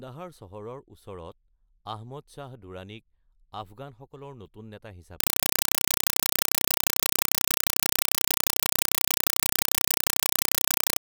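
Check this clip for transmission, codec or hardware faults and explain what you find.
One fault is present.

Compressed stream played as audio, from 5.20 s to the end: an encoded bitstream, which points to 192 kbps Dolby Digital (AC-3), is output as plain samples without decoding. Each 4.0 ms data burst plus zero padding repeats 31.25 times a second, replacing the speech with loud, chattering static.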